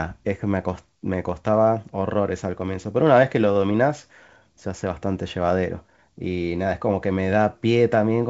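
No technical faults can be heard in this speech recording. It comes through G.722 wideband telephone coding at what sounds like 64 kbit/s, with any coding damage faint at most and nothing above about 7.7 kHz.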